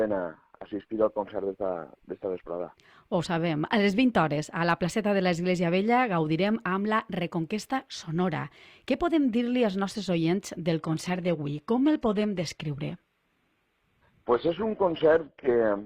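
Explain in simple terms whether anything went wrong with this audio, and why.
Yes. At 10.79 s the sound suddenly turns duller, losing everything above 14.9 kHz, and stays that way to the end. This is an adaptive stream at a lower bitrate. Unlike a dropout, nothing goes silent. Quality simply switches down mid-stream.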